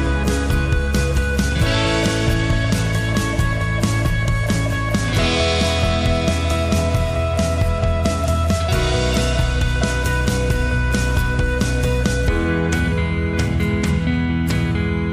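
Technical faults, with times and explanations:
No technical faults can be heard anywhere in the audio.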